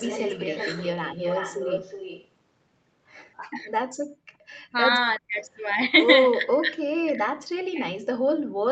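A speech recording from a call, with three kinds of fault. From the start to 2.28 s a delayed second copy of the speech trails the talker by 367 ms, roughly 10 dB below the main voice. Shorter, much quieter traces of the same copy return at 4.51 to 4.61 s and 6.51 to 6.59 s. This is an echo leak, likely from a far end on loudspeaker whose echo canceller let part of its microphone pickup through and sent it back. Speech suppressed in double talk shows up as the voice being pushed down while the far side was playing on the loudspeaker. It sinks by around 25 dB at 3.49 to 3.67 s and cuts out by around 40 dB at 5.19 to 5.37 s. From 6.37 to 7.86 s it keeps dipping in pieces by around 30 dB, adding up to most of a second. The likely cause is an echo canceller that could not tell the talker from loudspeaker echo and attenuated both. The room sound also drops away, by about 34 dB at 4.06 to 4.49 s and about 31 dB at 8.47 to 8.63 s, then comes back. 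That is background gated by the echo canceller, which clamped the microphone hard while the loudspeaker played. The audio passed through an Opus WebRTC call path that stops at 8 kHz.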